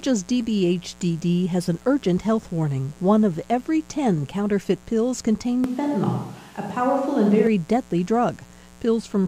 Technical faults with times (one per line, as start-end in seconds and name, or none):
0.00-9.27 mains buzz
5.64-7.47 switch to a distant microphone